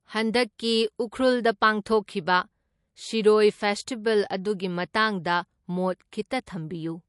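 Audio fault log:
Throughout: MP3 compression. Nothing sounds above 11.3 kHz, and weak detail flickers in and out with a watery, swirly texture, likely from an MP3 encoder starved of bits, which fits a rate near 48 kbps. Unlike plain low-pass filtering, the damage shifts from moment to moment.
6.46 s: pre-echo. A short hiss of about 10 ms arrives just before a sharp attack, which itself sounds softened. The codec spread noise meant for the loud onset across its whole block, leaking into the quiet instant before. Unlike a click, it precedes the attack.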